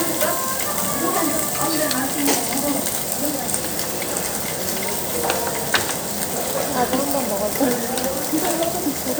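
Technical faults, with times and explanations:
No technical faults can be heard in this recording.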